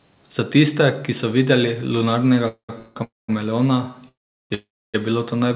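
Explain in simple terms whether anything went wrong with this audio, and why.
The speech has five call audio freezes, at 2.48–2.71 s, 2.79–2.97 s, 3.03–3.30 s, 4.08–4.52 s and 4.54–4.96 s, just before "je bilo to". Each stalls for a sixth to just over two-fifths of a second, fading into buzz or silence, then resumes with nothing lost. The likely cause is delayed call packets. The muffled, phone-like sound, with nothing above 4 kHz, comes from the call path itself.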